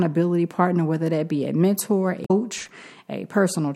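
A speech clip with two separate faults close together. Right after "that be a mentor", from 2.22 to 2.31 s, damaged data in a compressed stream makes the decoder misread a stretch of frames and hunt for the next valid header, so about 86 ms comes out garbled before the audio picks up again. On a spectrogram this shows as a narrow vertical smear of garbled energy with a clean edge where sync returns. In the waveform the speech envelope breaks off abruptly instead of trailing away. Shortly after, from 2.58 to 2.69 s, a loose connector crackle appears: a worn or dirty contact making and breaking rapidly, chopping the signal for about 110 ms and giving an irregular scratchy burst. The waveform shows a cluster of sharp spikes and dropouts at uneven spacing, and the spectrogram shows thin broadband vertical lines scattered unevenly over that interval.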